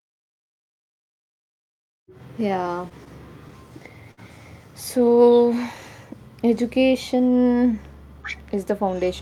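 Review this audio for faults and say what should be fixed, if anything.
At 4.11 to 4.19 s there's a short stall from a late packet. The packet turned up late, the jitter buffer ran dry, and the receiver stretched the last bit of speech by about 60 ms until it arrived. Nothing's missing, but the sound hangs, and everything after plays 60 ms later. A slightly deeper or adaptive jitter buffer would absorb a late arrival like that.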